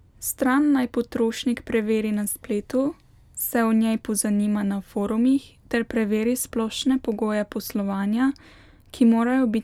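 Nothing in this speech recording stands out as a technical problem, so there's nothing to flag here.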